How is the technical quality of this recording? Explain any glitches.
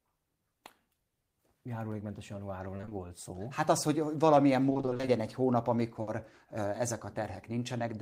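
The recording is marred by packet-loss glitches at four points.

Short concealed packet loss at 0.67–0.71 s: about 20 ms of audio arrived too late and was filled by extending the preceding sound, leaving a brief smear.

Repeated packet loss (robotic sound) at 2.77–2.93 s and 4.69–5.09 s: short gaps of up to 20 ms recur, so half of each stretch is patched, giving a choppy texture with pieces missing.

Burst of packet loss at 6.01–6.09 s: about 60 ms went missing, and the receiver held the last sound while fading it before the audio resumed further on.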